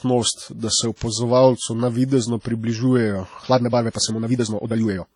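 Throughout the clip, the speech carries a ringing, washy quality. A hiss rises and falls with the signal. The damage is heavy. The likely cause is WMA compression at a low bitrate, which fits about 32 kbps. This transform codec quantises whole blocks of sound at once. With long blocks, its noise spreads across tens of milliseconds. At such a low rate, weaker spectral lines are dropped altogether.

At 0.96 s, a short hiss runs ahead of a sharp onset for about 56 ms, to 1.01 s. This is pre-echo. The onset fell late in a coding block. Noise sized for the loud part filled the quiet moment before it. The same happens at 2.40 s, spreading about 54 ms to 2.45 s. Each of these attacks sounds smeared rather than crisp.

From 3.4 s to the end, the pace jumps abruptly. The speech runs about 1.69 times faster, yet its pitch holds steady. It sounds rushed. This is a time-stretched section. Software likely squeezed the audio to fit a length, and it kept the pitch by dropping short pieces. 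Within that stretch, at 3.90 s, another pre-echo spreads hiss for about 54 ms, to 3.95 s, ahead of an attack.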